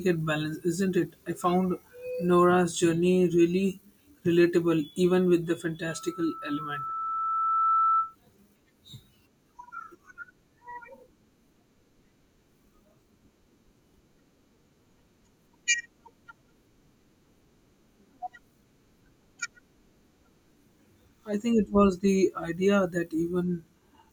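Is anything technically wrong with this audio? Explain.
Yes. A loudspeaker feedback squeal runs from 5.9 to 8.15 s, after "relatable even with the". The microphone hears its own loudspeaker, and a 1.3 kHz tone swells over about two seconds to roughly speech level.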